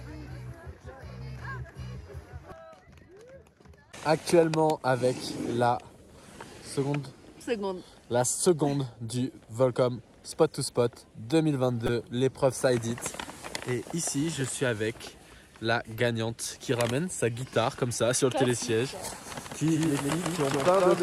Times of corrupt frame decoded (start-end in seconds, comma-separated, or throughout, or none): 11.86-11.89, 15.97